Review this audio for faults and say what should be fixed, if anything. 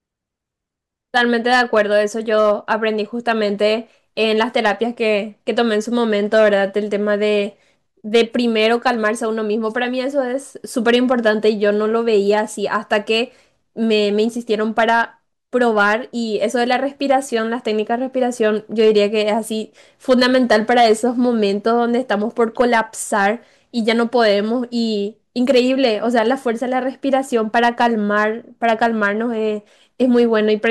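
Hard clipping runs throughout the speech, driven about 5 dB past what the signal chain can pass, so the loudest peaks are sliced flat. Those squared-off tops add high harmonics, heard as brief crackle on stressed peaks, since under one percent of samples exceed the limit.

To prevent it, lower the input gain or add a limiter before the overloading stage so peaks stay below full scale.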